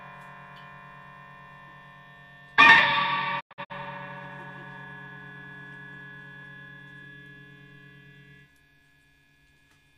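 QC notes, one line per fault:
3.39 to 3.72 s, digital broadcast dropout. The sound fades out over about 20 ms and breaks into several short holes, the longest 96 ms. About 192 ms goes missing across 288 ms. The receiver muted on bad frames, which fits roughly 24 ms frames, and that content is gone.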